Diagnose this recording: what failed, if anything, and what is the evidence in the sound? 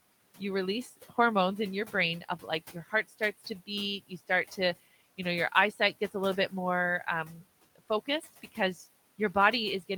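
Speech cut by the noise suppressor, between 2.72 and 3.21 s, at the call-processing stage. Within that half-second, a total of around 150 ms of speech drops by up to about 13 dB, so soft consonants and word endings sound swallowed or faint. The suppressor treated those low-level parts of the speech as background and turned them down with it. The room noise sits about 21 dB below the speech.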